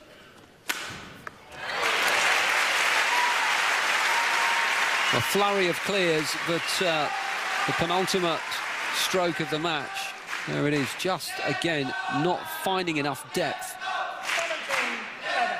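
No technical faults are audible.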